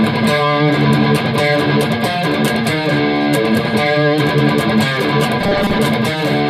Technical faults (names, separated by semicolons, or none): robotic sound from repeated short buffers